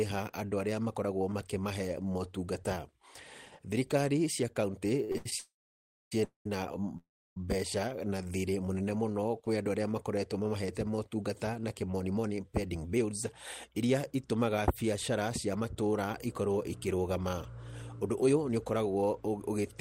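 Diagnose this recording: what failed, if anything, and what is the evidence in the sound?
Repeated stalls (stutter) at the network jitter buffer, 5.04–5.33 s: four short gaps, the longest 77 ms, are filled with repeated sound. These show as smeared, stretched spectrogram columns breaking up the syllable rhythm.

Call audio freezes at 5.39–6.12 s, 6.24–6.46 s and 6.97–7.37 s, likely from network delay draining the buffer. Each shows a buzzy smeared tail fading to a flat blank waveform.

Jitter buffer speed-up runs after "mamahete motungata na" at 11.99–13.13 s (112%), then at 13.68–16.42 s (108%) and 18.04–19.81 s (119%). The spectrogram shows compressed syllables with unchanged harmonic spacing.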